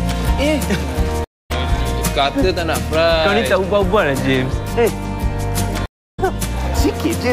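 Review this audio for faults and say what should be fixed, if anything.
There are two stream reconnects. The audio drops out at 1.24 to 1.51 s (about 0.25 s of silence) and again at 5.86 to 6.20 s (about 0.32 s). Each time the player lost its connection and restarted decoding mid-stream, so the sound comes back roughly a fifth of a second further along. Better buffering and connection handling on the player would keep these reconnect gaps from happening.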